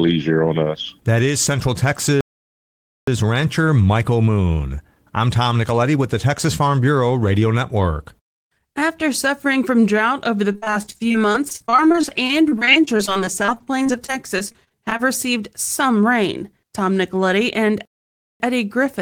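At 2.21 s the speech cuts out mid-flow and stays silent for about 0.87 s, resuming at 3.08 s. This is a playback stall, likely the player running short of data or having its output thread blocked. A second, shorter stall silences the speech from 17.85 s to 18.40 s, about 0.55 s.

Between 10.52 s and 15.01 s the speech turns choppy and robotic, riddled with brief holes up to 40 ms long. This is repeated packet loss, with each hole patched by stretching the preceding sound. About a fifth of that stretch is filled this way.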